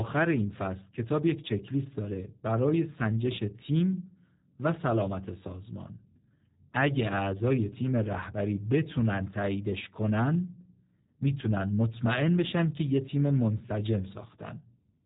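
From start to finish the speech carries the sound of G.729 codec coding, and the character points to the G.729A variant at 8 kbit/s. Nothing above about 3.8 kHz survives, so sibilants are dull and the top end is gone. The codec rebuilds each 10 ms frame from a vocal tract filter, a pitch predictor and a few sparse pulses, and that crude excitation leaves the voice plainly rough, buzzy and synthetic throughout.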